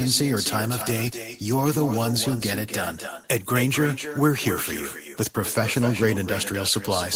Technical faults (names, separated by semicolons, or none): echo with no canceller